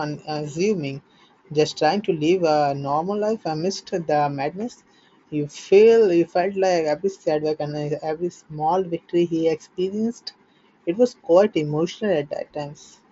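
Nothing stood out on listening to this speech clip.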